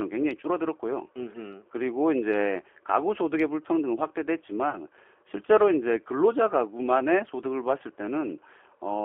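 From start to finish the speech carries the sound of the G.729 codec, consistent with an 8 kbit/s stream. The encoder models each 10 ms frame as a vocal tract filter plus a pitch predictor and a few pulses, so the speech comes through intelligible but rough and slightly synthetic, with plainly audible coding damage. On a spectrogram the energy sits in a telephone band of 300 Hz to 3.4 kHz, with nothing above and a thinned, grainy texture within it.

At 4.70 s a stretch of audio goes missing, and VoIP packet loss concealed by the speech codec fills the gap until about 4.81 s. The loss matches one dropped packet of 30 ms. The decoder extends its last pitch and filter settings and lowers the gain frame by frame, so the sound briefly smears into a buzzy tone or coloured noise that fades. Recovery is sluggish because each frame depends on the one before. The waveform shows a decaying envelope there.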